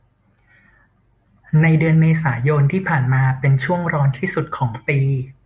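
No technical faults are audible.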